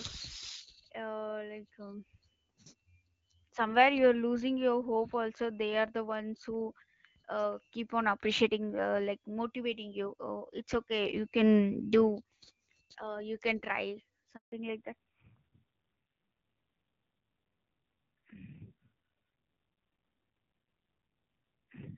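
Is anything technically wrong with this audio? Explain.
Yes, there are two faults, and they are linked.

At 14.36 s the speech cuts off in a handover gap lasting 160 ms, until 14.52 s. The call was being moved from one network link to another, and no speech frames were delivered during the switch. The sound decays within a few tens of milliseconds into dead silence, and whatever was said in that window is lost rather than delayed.

From 14.52 s to the end of the clip there is a fallback to narrowband. Before the gap the speech carries the fuller band of HD Voice, with light codec coloration consistent with AMR-WB at around 12.65 kbit/s. After the handover, nothing remains above 4 kHz. The speech turns muffled and loses its sibilance, and it takes on a rough, buzzy texture. That texture fits a low-rate narrowband AMR mode of about 5.9 kbit/s, which the new link negotiated in place of the wideband codec.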